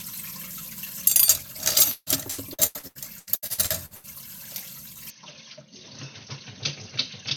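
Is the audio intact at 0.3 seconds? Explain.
Yes, the audio is intact at 0.3 seconds, with no fault at that moment.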